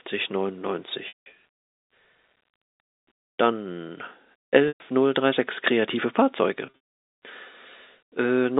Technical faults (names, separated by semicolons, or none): packet loss with pitch repetition